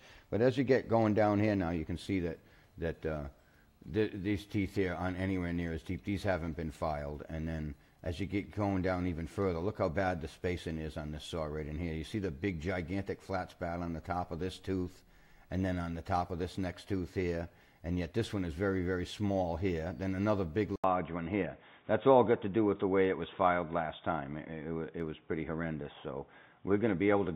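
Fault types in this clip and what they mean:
input switched to a poorer device: After an 80 ms gap at 20.76 s, the sound turns dull until the end, with nothing above 3.8 kHz, likely from a change of input device. Unlike plain filtering, a faint new background noise arrives while the level holds steady.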